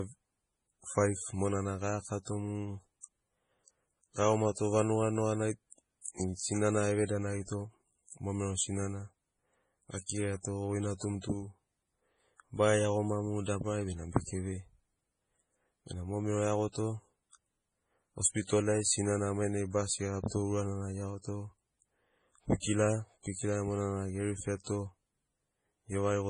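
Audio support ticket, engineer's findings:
MP3 compression, throughout: no content above 10.5 kHz, watery swirling texture, smeared consonant attacks, sibilants chirpy and metallic. Likely heavy lossy encoding at a starved bitrate, consistent with roughly 24 kbps: treble cut at a fixed frequency, weak spectral lines dropping in and out between frames.

Pre-echo, 6.01–6.06 s: short hiss for about 42 ms ahead of a sharp speech onset, attack blunted. Transform-codec block artefact: quantisation noise sized for the loud onset spread across the whole block, filling the quiet lead-in.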